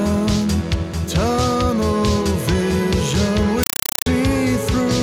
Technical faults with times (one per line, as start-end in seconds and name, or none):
3.63-4.06 compressed stream played as audio